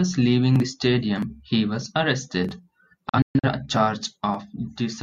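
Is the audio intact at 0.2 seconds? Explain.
Yes, at 0.2 seconds the audio is intact, with no dropout, click, distortion or other fault at that point.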